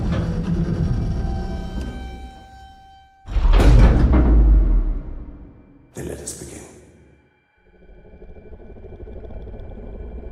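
No technical faults can be heard anywhere in the recording.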